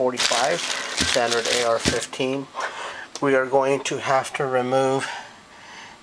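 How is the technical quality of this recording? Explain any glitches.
No glitches are audible anywhere in the recording, so there is nothing to explain.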